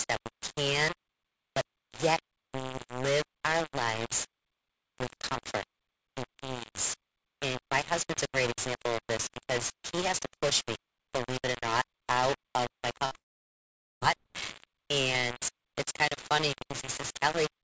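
Low bit depth without dither runs through the whole recording. It sounds like harsh, grainy distortion that shifts with the speech, with the quantisation error nearly as loud as the signal. That points to roughly 4-bit rounding, likely from rounded sample resolution with no dither to decorrelate it. Quieter syllables break up into sputter.

Short concealed packet loss comes at 12.94 to 12.97 s, right after "not out of my". About 20 ms of audio never reached the decoder. The receiver extended the preceding sound for around 15 ms and then crossfaded back, which leaves a brief smear.

A burst of packet loss follows from 13.05 to 13.13 s. Roughly 60 ms went missing in one run. Concealment stretched the last sound for about 53 ms, fading it out before the speech resumes with that stretch skipped.

A second short concealed packet loss sits at 13.13 to 13.16 s. About 20 ms is patched with some 17 ms of extrapolated sound, heard as another quick wobble.

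A long network dropout then runs from 13.18 to 14.03 s, likely an interruption in packet delivery. Around 0.84 s of audio is lost. Instead of a fading continuation, the gap is heard as silence, and the speech returns further on with that part gone. Throughout, the call codec passes nothing above 8 kHz.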